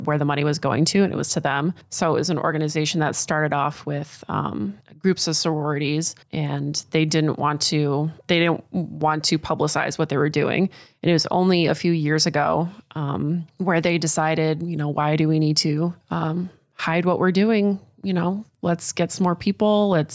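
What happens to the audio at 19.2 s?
Gain pumping runs through the whole clip, including 19.2 s: the level swings by around 5 dB, squashing louder and softer speech closer together, likely from excessive input gain triggering a fast limiter.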